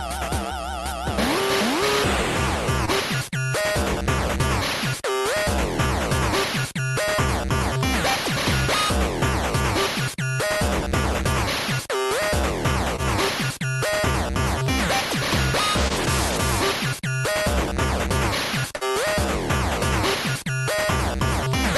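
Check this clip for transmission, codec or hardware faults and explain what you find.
Four transmission faults appear, all from packets lost on the way to the receiver: three short concealed losses and one longer burst.

Short concealed packet loss occurs at 2.85–2.89 s, 12.96–13.00 s and 15.88–15.92 s. Each time, about 20 ms of audio failed to reach the decoder in time. The receiver patched the hole by extending the preceding sound for roughly 17–19 ms, then blended back into the real signal. You hear a brief smear or wobble.

A burst of packet loss runs from 18.76 to 18.84 s. Here 60 ms arrived too late or not at all, spanning consecutive packets. The concealment carried the last sound forward for about 52 ms while fading it down. The result is a short held tone or hiss that dies away, followed by a jump where the audio resumes further on. The material from that 60 ms stretch is missing.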